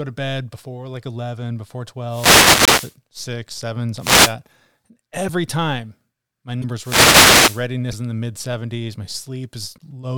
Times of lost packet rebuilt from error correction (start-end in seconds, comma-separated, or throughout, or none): none